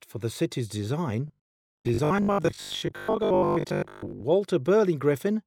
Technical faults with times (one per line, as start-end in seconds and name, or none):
1.28-4.24 robotic sound from repeated short buffers
1.84 compressed frames skipped